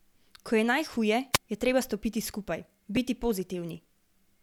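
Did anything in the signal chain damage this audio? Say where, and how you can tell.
Yes. The first damage comes from the wireless microphone's radio link, before the audio reaches any wiring or converter. From 1.33 to 1.38 s there is a wireless microphone squelch dropout. The RF signal fades, hiss rises briefly, and the receiver's squelch closes for a very short mute before the speech returns. The gate opening and closing on a weakening carrier, with a rush of noise around it, is what marks this as a squelch event.

The second fault is in the driver or buffer stage. At 2.97 s there is a repeated buffer. A block about 5 ms long plays one extra time because fresh samples were late, and the hard join makes a tiny click or buzz rather than an audible stutter. A segment that short fits a small device buffer underrunning, with the driver replaying the previous block in place of the roughly 5 ms of audio that never arrived.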